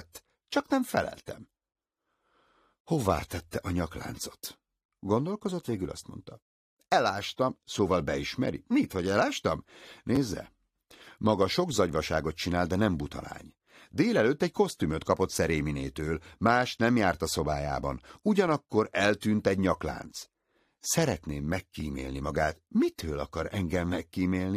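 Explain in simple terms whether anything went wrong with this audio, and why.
Two brief glitches come from a repeated buffer. The playback device didn't get fresh audio in time, so it replayed the tiny slice it had just played, about 10.7 ms long, which fits a 512-sample buffer. From 10.16 to 10.18 s that slice plays twice more, and at 21.80 s once more. Each repeat is so short it sounds like a small click or buzz. Unlike a dropout, there's no silence and nothing goes missing.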